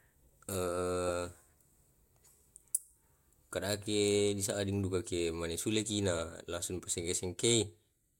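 At 0.53 s and 3.84–3.86 s, a repeated buffer replays a 10.7 ms speech block, once then twice, which fits a 512-sample buffer. The result is a click or brief buzz, seen as identical waveform segments with hard joins.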